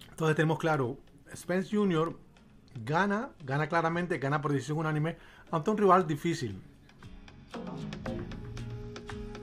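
A Bluetooth SBC bit pool drop occurs twice, from 2.02 to 4.45 s and from 8.82 s to the end. The link apparently cut the bit pool, which fits a drop from about 31 to 15, near 105 kbps. Starved upper sub-bands dull the treble, while gritty quantisation noise rises.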